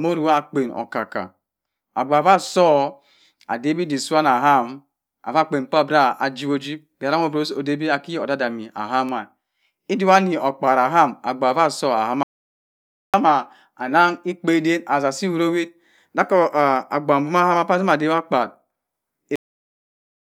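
At 12.23 s the input was likely lost for a moment, through a failed link or a stray mute, while writing carried on, giving an audio dropout to silence: the speech breaks off mid-flow into silence, without room tone, until 13.14 s, and about 0.91 s of speech is simply gone.

At 19.36 s the final buffers were never written, producing a cut-off end: the speech stops abruptly in the middle of a sound and falls straight to digital silence with no natural decay, leaving the last 0.85 s of the recording empty.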